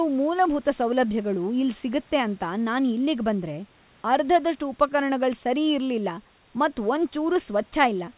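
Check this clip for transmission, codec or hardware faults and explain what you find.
No faults detected.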